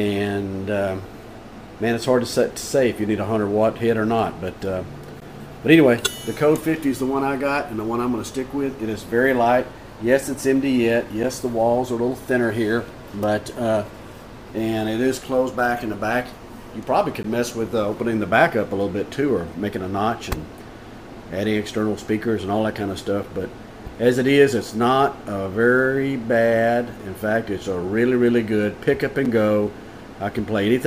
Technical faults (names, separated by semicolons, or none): gap between stream segments